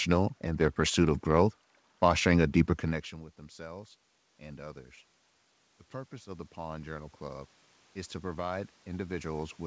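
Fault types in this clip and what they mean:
Automatic gain rising: after the input drops by about 24 dB, the gain control slowly raises its gain, so voice and room noise swell together. It climbs about 4 dB from 2.82 to 4.0 s, about 5 dB from 6.09 to 7.57 s, and again from 8.2 s to the end.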